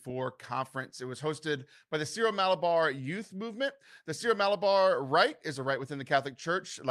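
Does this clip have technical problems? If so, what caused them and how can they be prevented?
No, there are no technical problems to hear in this recording. Since nothing went wrong, there is no cause to trace and nothing needs to be prevented.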